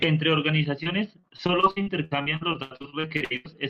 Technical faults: repeated packet loss (robotic sound)

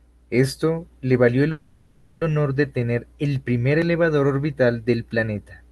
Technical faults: call audio freeze

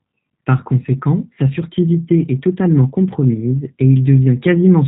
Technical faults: G.729 codec

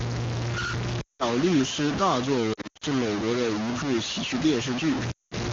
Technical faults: low bit depth without dither; lost AMR speech frames

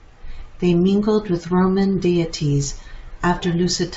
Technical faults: none

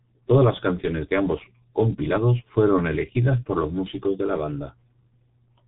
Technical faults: G.723.1 codec

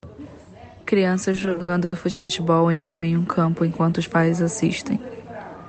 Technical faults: automatic gain rising; repeated stalls (stutter); call audio freeze; jitter buffer slow-down

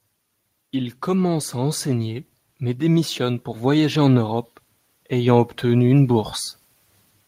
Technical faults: automatic gain rising

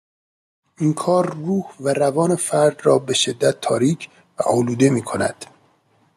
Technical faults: automatic gain rising

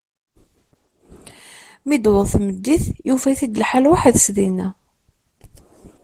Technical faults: Opus voice compression

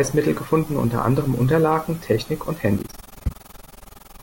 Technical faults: overlap-add ripple

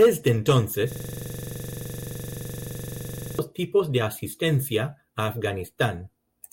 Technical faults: system hang loop

